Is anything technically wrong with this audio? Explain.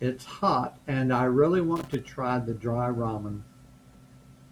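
Yes. From 1.76 to 2.08 s the speech is broken by loose connector crackle, a short burst of scratching about a third of a second long. A worn or dirty contact in the cable path is intermittently losing and regaining connection, so the signal is chopped on and off, and any DC on the line turns each break into a pop. These crackles are irregular and scratchy.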